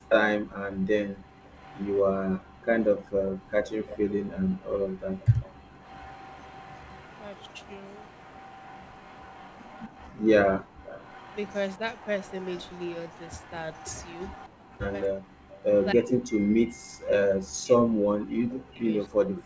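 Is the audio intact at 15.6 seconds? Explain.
No. At 15.6 s two faults overlap. An echo leak runs from 0.09 to 15.85 s: a faint copy of the speech trails it by 252 ms, roughly 25 dB down. The likely cause is a loudspeaker echo canceller on the far side letting part of its microphone pickup through. On a spectrogram the echo shows as a weak duplicate of the speech harmonics, shifted a quarter second later.

Speech suppressed in double talk runs from 15.13 to 19.45 s. With both sides active, the canceller likely could not separate the local talker from the echo and turned the speech down, by as much as around 40 dB, so the speech dips or cuts out in pieces. The waveform shows sudden envelope collapses, and the spectrogram shows gaps or thinned upper bands below the 8 kHz ceiling.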